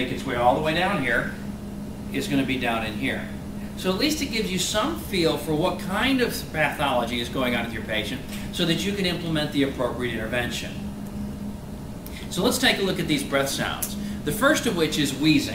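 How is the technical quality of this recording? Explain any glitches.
Nothing stood out as a technical problem on listening, so there are no glitches to explain.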